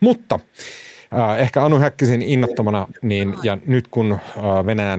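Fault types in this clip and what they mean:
Speech suppressed in double talk: From 1.85 to 2.04 s and again from 2.71 to 3.91 s, the speech drops in level, by up to about 20 dB in the first stretch and about 25 dB in the second. Roughly 700 ms of the longer span is affected. This is likely the echo canceller hearing loudspeaker sound and the local talker at once, failing to tell them apart, and turning both down together.
Echo leak: From 2.44 to 2.65 s and briefly from 2.92 to 2.98 s, a copy of the voice returns 330 ms late. It sits about 10 dB below the speech the first time and about 35 dB below it the second. This is likely loudspeaker sound that one side's microphone picked up and its echo canceller did not fully remove, so the leftover was sent back.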